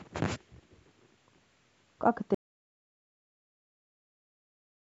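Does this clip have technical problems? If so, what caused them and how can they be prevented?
Yes. At 2.35 s the speech cuts out mid-flow and never returns, leaving pure silence, with no room tone at all, right through to the end. That's an audio dropout to silence: the input likely got lost, through a loose cable, a dropped wireless link or an accidental mute, while the recorder kept writing silence, so whatever came after that point is simply gone. To prevent it, secure connections, check mute states and monitor levels live during recording.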